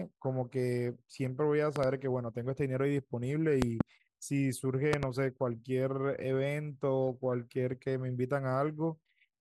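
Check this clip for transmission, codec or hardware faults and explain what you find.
Three loud pops break into the speech, each a quick pair of sharp hits. Loud pop, at 1.76 to 1.86 s, 3.62 to 3.83 s and 4.93 to 5.05 s: a sudden voltage pulse, likely from a plug, switch or static discharge, lands on the signal. Each is a double thump about 15 dB above the speech in the first and about 20 dB in the others, with the speech continuing underneath.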